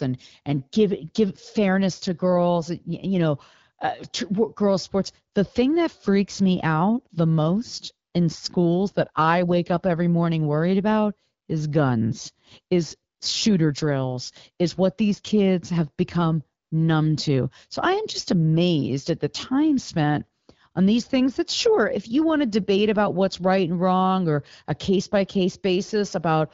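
At 13.17 to 13.19 s, between "about is guns is" and "shooter drills is what", and again at 16.63 to 16.71 s, after "these kids have become" and before "numb to", AMR comfort noise briefly replaces the real signal. In each gap the sender treated the audio as silence, and the receiver filled it with smooth synthetic hiss. Unlike a packet-loss dropout, there is no dead silence, click or garbled fragment. The background just turns steady and featureless, then switches back as speech resumes over the otherwise clean wideband coding.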